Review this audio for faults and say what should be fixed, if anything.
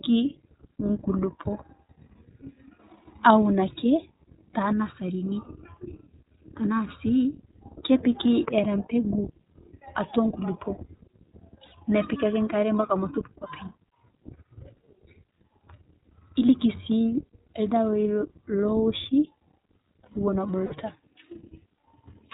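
The iLBC codec shapes the whole recording. Nothing passes above 4 kHz, and the speech has a plainly audible rough, synthetic edge, consistent with 15.2 kbps coding in 20 ms frames. A spectrogram shows an empty band above 4 kHz and blurred harmonics. A wideband codec such as Opus would prevent this where bandwidth allows.

Lost iLBC frames cause gaps at 5.44–5.48 s, 11.66–11.73 s and 20.66–20.74 s. The first gap lasts 20 ms, consistent with one lost frame. The other two last 60 ms each, consistent with three lost frames. In each gap the decoder repeats the last pitch cycle mixed with noise, so a brief buzzy, held vowel replaces the speech. The waveform shows repeated pitch cycles mixed with noise, and the spectrogram shows flat, frozen harmonic bands, with clean recovery immediately after. Forward error correction or a larger jitter buffer on the network path would reduce these losses.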